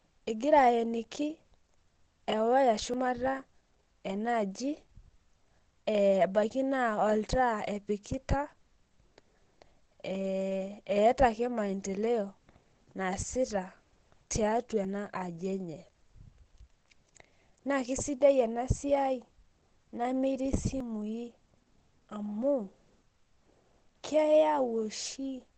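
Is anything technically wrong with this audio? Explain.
Yes, two faults are audible in this speech clip.

Throughout, the speech sounds muffled and hoarse, with heavy coding damage and no content above 8.8 kHz. This is likely Opus compression running in its SILK speech mode. At a low rate, around 12 kbps judging by the damage, the encoder drops full-band coding and models the voice within a wideband limit. Detail is lost and the voice takes on a rough, smeared quality rather than clean harmonics.

At 2.94, 8.89, 14.85 and 20.80 s, the audio skips forward abruptly, with each side butted together and no gap of silence. The skips recur every 6 s, so the likely cause is audio missing between chunks: a recorder or processor working in 6-second blocks drops a short slice, roughly 40 ms, each time it closes one block and starts the next. Each skip shortens a piece of whatever sound it falls in.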